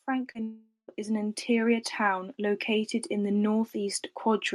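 Speech heard through a call codec whose sound stops at about 12 kHz, which fits Opus at 48 kbps. Automatic gain is rising from 0.05 s to the end. The level of the speech and the background swells together as the gain control lifts a quiet input. A short concealed packet loss occurs at 0.31 to 0.37 s. About 40 ms is missing, smeared over by a continuation of the last sound. From 0.43 to 0.90 s the last sound drags on as a fading buzz or hiss, then gives way to silence for roughly a tenth of a second. Speech resumes without the lost part. This points to a likely long network dropout.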